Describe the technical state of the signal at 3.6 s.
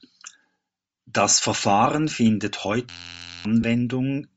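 At 3.62 s there is a brief dropout of about 15 ms from lost LE Audio frames, consistent with two missing 7.5 ms frames. The decoder repeats the previous spectrum with scrambled phase, so the speech blurs into a short noisy smear. On a spectrogram it appears as a thin vertical band of diffuse noise, and the waveform shows a brief stretch of irregular, noise-like samples.

Around that moment the speech also has a grainy, breathy edge, likely from Bluetooth LC3 compression at a low bitrate near 32 kbps. Much of the upper band is discarded and replaced with synthetic noise, so a spectrogram shows speckled, unstructured energy in the highs instead of clear harmonics.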